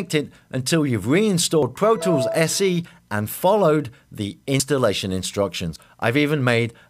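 At 1.63, 4.60 and 5.76 s the audio jumps ahead, skipping around 50 ms, then about a tenth of a second, then 50 ms again. That's most likely a dropped buffer (overrun): samples got overwritten before being read, so the edges butt together.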